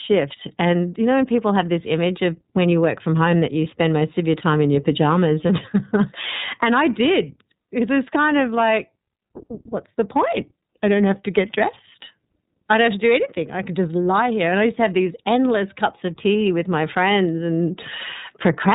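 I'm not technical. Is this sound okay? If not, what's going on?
No. The whole recording has been squeezed through the iLBC codec, a phone-call compression method. It throws away everything above 4 kHz, so the speech sounds muffled, and it rebuilds each 30 ms slice separately, which makes the speech plainly rough and synthetic.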